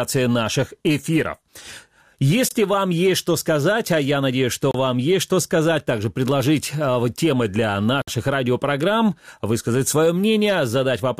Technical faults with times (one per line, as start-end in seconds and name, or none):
2.49-2.51 Bluetooth stall
4.71-4.75 Bluetooth stall
8.02-8.08 Bluetooth stall